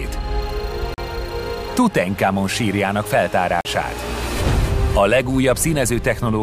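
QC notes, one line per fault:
0.94 s and 3.61 s: block of digital silence. Each time the audio drops to silence for 40 ms and then returns. There is no fade on either side. The waveform jumps straight to silence and straight back. At 40 ms the gap is long enough to hear as a brief hole. This points to the output buffer not being filled in time.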